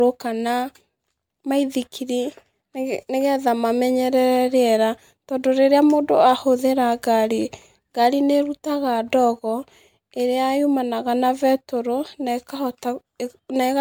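Throughout, the speech sounds swirly, hollow and smeared, and attacks blur. This is generation loss, likely from about four MP3 encodes, fitting 128 kbit/s. Each pass requantises on a shifted frame grid. Noise and spectral holes pile up.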